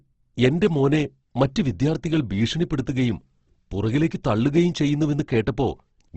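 Throughout, likely Opus compression at a low bitrate, which fits 16 kbps, removes everything above 8.2 kHz and leaves the speech plainly rough and grainy.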